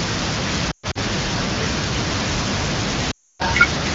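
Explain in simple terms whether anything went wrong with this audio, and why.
Lost AMR speech frames cause two hiccups, at 0.71 to 0.98 s and 3.11 to 3.42 s. Radio errors spoiled chunks of the sound, so the decoder stretched the last good bit, which quickly drops to near silence.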